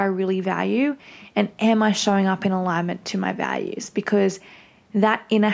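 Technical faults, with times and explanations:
Listening through the speech, with its low room noise well beneath the voice and the call microphone processing capping content at 8 kHz, nothing stood out as a technical fault.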